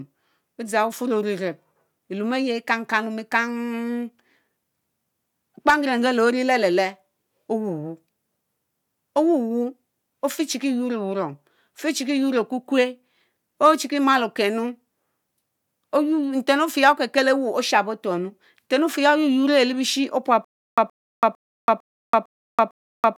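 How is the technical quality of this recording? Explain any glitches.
The recording carries one clear playback fault near its close. From 20.45 s to the end, it shows stutter with silent gaps: a 122 ms fragment of speech plays, then 331 ms of dead silence, repeating six times at a steady 453 ms period. This is likely a stalled stream or player re-serving its last buffered chunk on each retry before running dry, so the intended audio is lost. On a waveform it appears as identical short blocks separated by flat silent gaps; a spectrogram shows repeated matching slices between fully blank columns.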